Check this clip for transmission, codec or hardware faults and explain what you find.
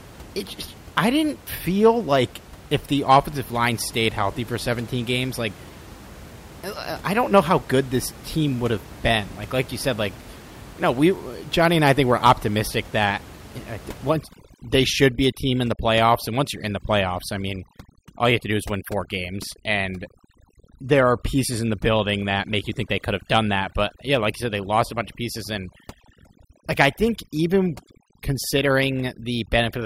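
There is one processing fault, overdone noise removal, running from 14.10 s to the end of the speech; the room noise, about 20 dB below the voice, is part of the recording. From 14.10 s, an overly aggressive noise reducer switches off narrow frequency bands near its noise estimate, taking quiet speech detail with them. The background drops and breaks up into twinkling specks. On a spectrogram, scattered isolated dots appear in blank gaps.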